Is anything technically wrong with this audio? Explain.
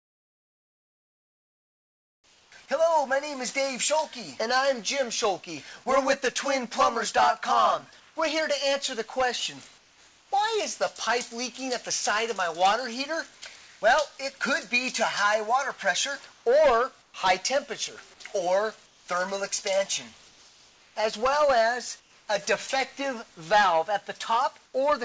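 Yes. The background is replaced by synthetic noise in several places, one onset is cut, and one passage is chopped. All of it sits within a band that stops at 8 kHz, which fits a wideband call codec.

Comfort noise in place of the background occurs from 0 to 2.52 s, 9.78 to 10.32 s, 16.32 to 17.14 s, 18.86 to 22.28 s, and 24.66 to 24.74 s. The likely cause is discontinuous transmission: the sender stops transmitting during detected silence, and the receiver generates shaped noise instead. The real ambience gives way to a flat, featureless hiss. It is about 6 dB quieter at the start and about 5 dB quieter at 9.78 s and 24.66 s.

The onset is clipped by the voice detector from 2.20 to 2.52 s. Here the detector likely reacted late when sound resumed, so the first 320 ms never left the sender and comfort noise filled that gap. The sound therefore enters abruptly, without its natural soft attack, right where the opening stretch of synthetic background ends.

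The sound is chopped by the voice detector between 13.38 and 13.82 s. Within this stretch the detector likely toggled between sending and muting more than once, and about 300 ms of material was swapped for comfort noise. The result is a choppy passage: quiet portions and edges drop out.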